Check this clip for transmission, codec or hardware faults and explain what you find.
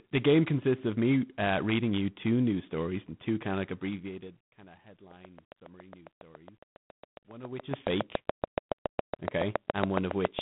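Two faults are present: codec damage from the whole clip, and a burst of regular clicking over its second half.

G.726 ADPCM at 24 kbit/s runs throughout. With only three bits per sample encoding the prediction error, the speech carries a rasping, level-following hiss. The line band is 150 Hz to 3.6 kHz, and a spectrogram shows nothing above 3.9 kHz, with grainy noise filling the band under the speech.

A train of clicks runs from 5.11 s to 10.4 s: roughly forty similar clicks at a regular 7.2 per second, peaking around 15 dB above the speech. They tick through the pauses too, and on a waveform they appear as evenly spaced spikes, or as vertical lines on a spectrogram. Likely cause: interference from nearby equipment or a faulty connection or power supply.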